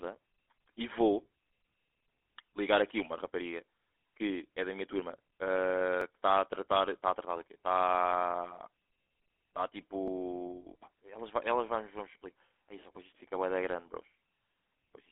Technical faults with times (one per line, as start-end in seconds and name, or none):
0.00-15.11 GSM full-rate codec
6.01 dropped buffer (overrun)
10.08 dropped buffer (overrun)